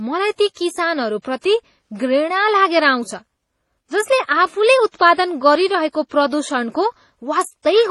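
Throughout the speech, nothing sounds above 12.1 kHz and two layers of coding artefacts overlap. This is likely transcoding between lossy codecs, fitting low-bitrate MP3 re-encoded as HE-AAC.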